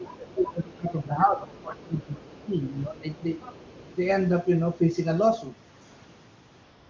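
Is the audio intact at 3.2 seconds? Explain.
No. From 3.15 to 3.23 s the echo canceller likely left part of the far-end loudspeaker signal in the microphone path, so the other side's voice leaks through: a brief, very faint scrap of a second voice, roughly 30 dB below the main speech.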